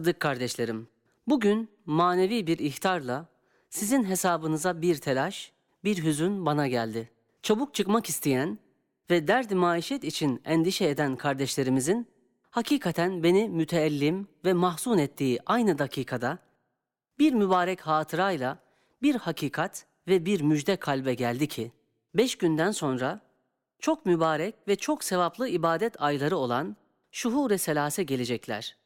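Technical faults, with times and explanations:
No technical faults can be heard in the speech recording, and the signal stays steady and intact across its whole duration.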